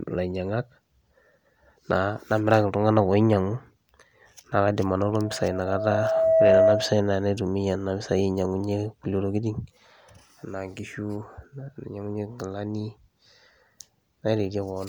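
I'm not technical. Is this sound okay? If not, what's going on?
No. From 4.99 to 7.06 seconds there is loudspeaker feedback squeal: a steady tone near 648 Hz swells over roughly a second and a half until it is much louder than the speech. It happens when a microphone hears the loudspeaker it is feeding. The sound loops round and round, and one pitch keeps getting louder on each pass until the loop is broken.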